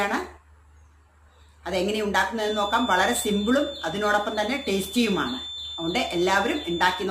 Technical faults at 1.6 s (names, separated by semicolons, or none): none